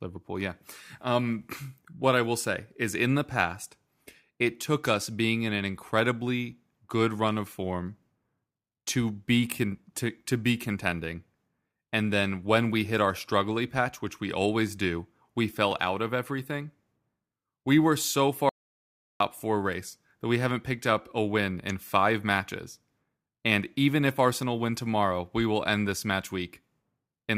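Speech, with an audio dropout to silence from 18.49 to 19.20 s, between "we were so" and "four race that we": about 0.71 s of silence with no room tone, unlike a natural pause. This likely comes from a brief input loss while recording continued.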